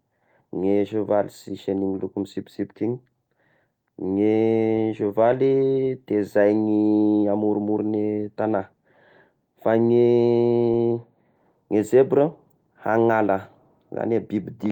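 No technical faults can be heard anywhere in the speech. Nothing in the recording calls for a timestamp or a repair.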